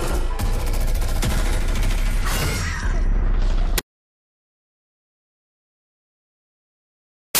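From 3.78 s to the end, the reader assembles each sample from the wrong bytes, misaligned or in swapped order, so the rapidly changing low-order bits land in the high positions. The result is a loud wash of harsh broadband noise.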